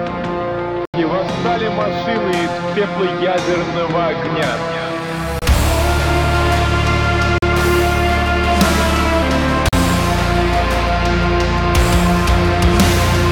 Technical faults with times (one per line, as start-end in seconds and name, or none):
0.85-0.94 block of digital silence
5.39-5.42 block of digital silence
7.38-7.42 block of digital silence
9.69-9.73 block of digital silence